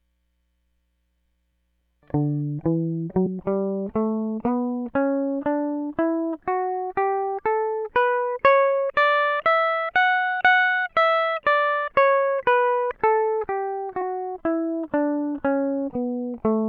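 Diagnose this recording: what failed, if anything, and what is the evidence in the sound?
At 3.25 s the music lurches forward by roughly a fifth of a second, and at 14.01 s it jumps again by a much smaller step, about one frame. This is compressed frames skipped at the codec stage: whole frames never reached the output, either lost from the file or rejected as corrupt by the decoder. The skip lengths fit a 24 ms frame, several at the first point and one at the second.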